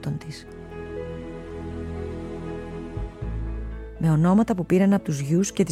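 Nothing here stands out as a technical problem; the sound carries on steadily without any interruptions, damage or other faults worth flagging.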